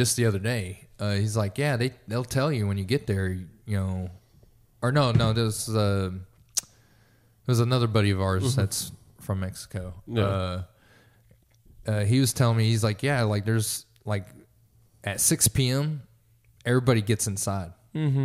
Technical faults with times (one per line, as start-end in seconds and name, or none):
none